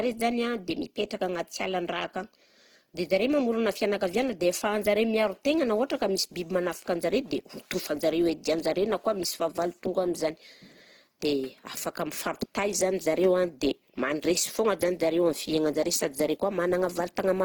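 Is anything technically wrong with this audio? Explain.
Yes. Opus compression runs throughout the speech, from start to finish. The damage is plainly audible: vowels and other steady tones turn noisy, rough and grainy, since the codec is short of bits and fills the bands it cannot afford to code with folded or noise-like content while keeping each band's energy. The damage is likely from Opus's music-oriented CELT mode at a low rate, fitting roughly 16 kbps. Bandwidth stays full, with content reaching about 20.1 kHz, so the sound is grainy rather than muffled.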